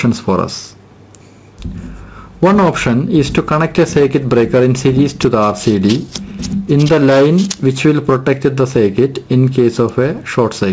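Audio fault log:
throughout gain pumping: The input gain is likely set far too high, so a fast limiter keeps clamping down on each loud sound. The gain swings by around 10 dB, and the dynamics sound squashed.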